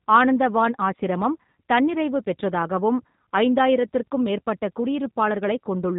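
G.729 codec coding runs from start to finish of this speech clip, and the damage is plainly audible. The audio has been rebuilt from a vocal tract filter, a pitch predictor and a few pulses per 10 ms frame rather than carried as a waveform, so everything above 4 kHz is missing and the speech sounds rough and faintly synthetic, which fits the 8 kbit/s G.729A variant.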